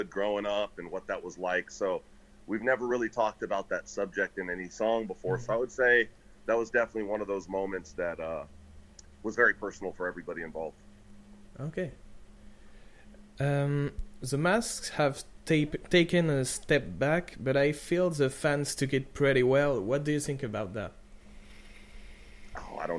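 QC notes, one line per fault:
No faults found. Nothing in the audio calls for a QC note.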